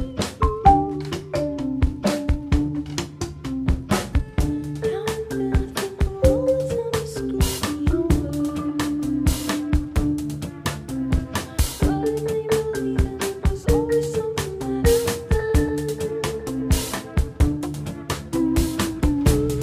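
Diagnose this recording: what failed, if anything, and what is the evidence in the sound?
Nothing failed in this recording.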